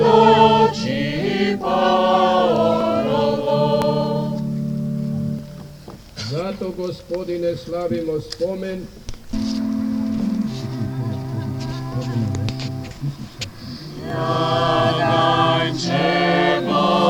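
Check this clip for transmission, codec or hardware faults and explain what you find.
There are four short skips in the sound, at 2.81, 3.82, 5.39 and 14.10 s, each a small forward jump of around 10 ms with no gap. They are likely dropped buffers (overrun): input wasn't collected before being overwritten, so the surrounding audio splices together.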